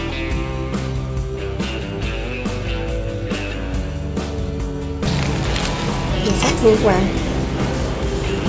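Nothing here sounds wrong: the audio simply carries the character of a normal call connection, with nothing above 8 kHz, which fits a wideband call codec along the lines of G.722 at around 64 kbps.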